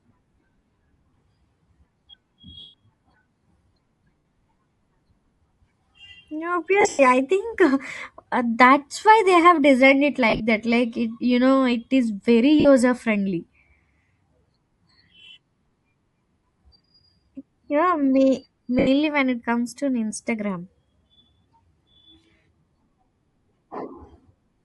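Speech with a breathy, grainy top end throughout, likely from Bluetooth LC3 compression at about 48 kbps. Lost LE Audio frames, concealed by the decoder repeating and fading the last spectrum, cause noisy smears at 1.10, 2.60, 4.18, 6.81, 10.30, 12.60, 18.79 and 21.92 s. The longest losses are about 140 to 150 ms in total, at 2.60 and 6.81 s, the second scattered over about 180 ms.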